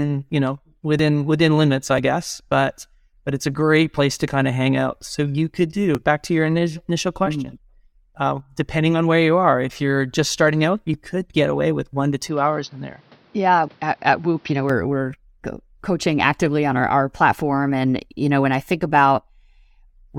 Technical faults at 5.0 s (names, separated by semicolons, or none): overlap between stream segments